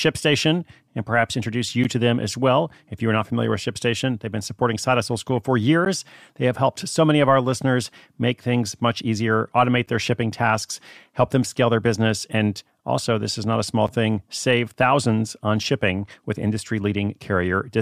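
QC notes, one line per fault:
1.84 s, 5.85 s, 9.86 s, 13.87 s: gap between chunks. The speech stops dead for about 12 ms at each point, then resumes with nothing missing. The holes recur every 4 s, so the audio was handled in 4-second chunks and each join got a short run of silence, from padding or a late chunk start. The waveform drops abruptly to a flat line and jumps straight back, and the spectrogram shows thin, hard-edged vertical blank stripes spanning all frequencies.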